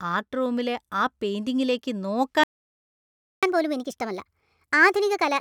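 A playback stall begins at 2.44 s: the speech cuts off mid-flow and the output goes completely silent for just under a second, until 3.43 s. The likely cause is that the player drained its buffer of incoming audio, or its playback thread was held up, so it had nothing to send to the output until data arrived again. The gap sounds like a hard dropout rather than a natural pause.

Catch-up at higher speed follows immediately, from 3.43 s to the end. Having fallen behind during the silence, the player pushes its backlog through faster by resampling, running at 1.25 times normal speed. Because the samples are simply played out quicker, the pitch rises with the tempo, by about four semitones, so the speech sounds hurried and noticeably higher, with a thin, chipmunk-like quality until the end.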